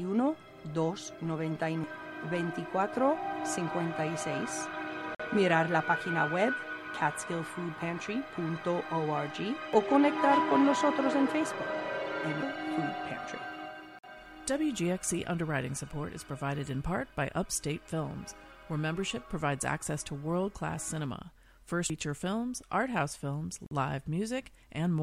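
Gap between chunks at 5.15 s, 13.99 s and 23.66 s: each time the sound stops dead for about 48 ms and then resumes. Nothing is missing. Playback simply pauses at each join, which points to the audio being delivered in chunks of 10 s, with silence inserted between them by codec padding or a player that starts each new chunk late.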